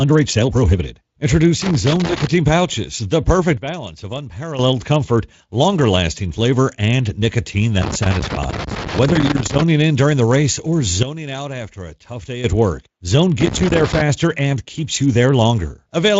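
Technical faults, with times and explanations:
1.62–2.27 s, 7.82–9.62 s (after "lasting flavor and nicotine", before "in during") and 13.41–14.01 s (before "and keeps you"): loose connector crackle. A worn or dirty contact keeps making and breaking, chopping the signal, so each stretch carries an irregular scratchy crackle over the sound.
2.07–2.12 s and 9.13–9.19 s: VoIP packet loss concealed by the speech codec. Each time, about 20 ms of audio never arrived. The speech decoder filled the gap by extending its last pitch and filter at falling gain, leaving a brief buzzy, fading smear.
3.57–4.59 s and 11.03–12.44 s (after "race or", before "at work"): sudden gain jump. The sound and background drop together without any ramp, by about 11 dB and then about 12 dB, and come back just as abruptly. A digital gain change applied between one sample and the next is the likely cause.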